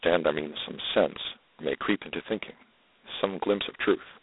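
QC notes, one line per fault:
throughout G.726 ADPCM: speech is confined to roughly 250 Hz to 3.7 kHz, with nothing above 3.8 kHz, and carries a heavy rasping hiss that swells and fades with the speech level. Steady background noise would stay constant instead. The coarse difference coding fits 16 kbit/s.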